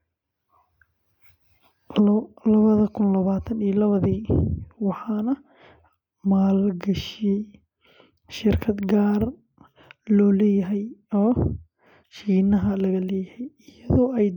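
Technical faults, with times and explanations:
Nothing technical stands out in this speech recording; there's no fault to point to anywhere along the way.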